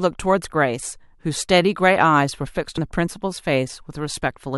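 At 2.77 s, compressed frames skipped: several whole frames of the encoded speech never get decoded, so playback jumps ahead by roughly 70 ms, which fits about three 23.2 ms frames.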